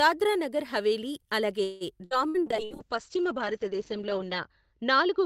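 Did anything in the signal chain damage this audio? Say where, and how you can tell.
Yes, two faults, both in the call's network and codec path.

Repeated packet loss (robotic sound) runs from 1.63 to 2.73 s, starting right after "నగర్ హవేలీ అలాగే". Four separate holes open in that span, the longest 172 ms. Each is papered over by stretching the last good sound, so about a third of the stretch (349 ms) is synthetic fill and 180 ms is outright gone. That gives a choppy stutter. Unlike a bitrate drop, the sound is broken into pieces, not dulled evenly.

A call bitrate drop starts at 2.42 s and lasts to the end. The network's bandwidth estimate fell and the Opus encoder was told to spend far fewer bits, which fits a fall from about 40 kbps to 8 kbps. For the last 2 s or so it sits at that floor. The audio turns coarse, and the top end is cut from 20 kHz down to 8 kHz. Unlike packet loss, nothing is missing. 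The whole signal is continuously muffled.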